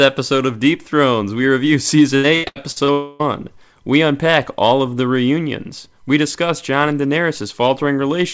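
Repeated packet loss (robotic sound) runs from 2.16 to 2.91 s in this speech recording, starting right after "we review". Five separate holes open in the stream, the longest about 82 ms. Each is patched by stretching the preceding sound, so roughly 43% of that span is synthetic fill, heard as choppy stuttering with fragments of speech gone. A long network dropout follows from 2.92 to 3.23 s. For about 0.3 s nothing real is heard; the last sound is smeared out as a fading buzz or hiss that never falls to silence, and the audio resumes afterwards with that portion simply missing. This is likely a longer break in packet delivery that outlasted what the receiver could bridge cleanly. Across the whole clip nothing is heard above 8 kHz, which fits a G.722 wideband call codec.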